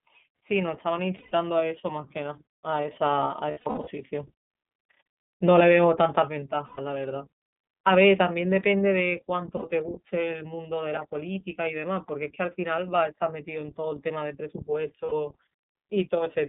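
From start to finish the speech passes through the iLBC codec, and the damage is plainly audible. The band is held to about 200 Hz to 3.6 kHz, giving a thin, boxed-in telephone sound with a rough, slightly synthetic grain. The texture fits iLBC's 13.33 kbps mode with 30 ms frames. On a spectrogram everything above 3.6 kHz is empty, with a hard ceiling, and there is little energy below 200 Hz.

Lost iLBC frames interrupt the speech five times: 1.17 to 1.32 s, 3.51 to 3.88 s, 6.66 to 6.79 s, 9.57 to 9.63 s, and 15.06 to 15.13 s. In each gap the decoder repeats the last pitch cycle mixed with noise, so the sound becomes a held, buzzy, breathy vowel. The 3.51 s loss is broken up over about 360 ms, with runs of up to about a tenth of a second. In the spectrogram the gaps show as frozen, smeared harmonics. In the waveform they appear as evenly repeating cycles, and the normal sound returns almost at once after each gap.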